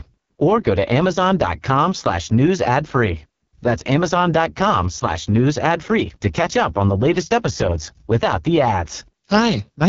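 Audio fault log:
throughout: AMR wideband (HD Voice) codec, heavily squeezed. The speech has a rough, raspy edge, and there's nothing at all above 7 kHz. The codec models the voice as pulses pushed through a vocal tract filter up to 6.4 kHz, then pads the top band with shaped noise instead of real detail. At a rate this starved, the model can't keep up, and you get that grainy, buzzy texture, which fits the 6.6 kbit/s mode, the lowest one.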